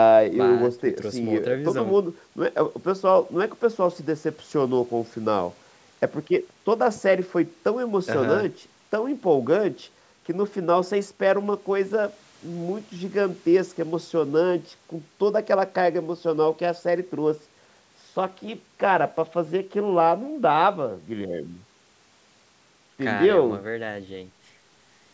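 Nothing here stands out as a fault; the speech has simply been through a call's microphone processing, which trims the deepest bass and leaves nothing above 8 kHz, and that's just how such a path normally sounds.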